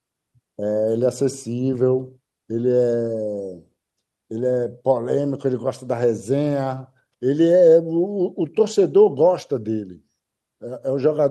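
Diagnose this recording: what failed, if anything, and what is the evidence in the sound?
Nothing failed here: the speech comes through an ordinary Opus call path with its top end rolling off at about 12 kHz, just as that codec would at this setting, and nothing in the sound points to any stage going wrong.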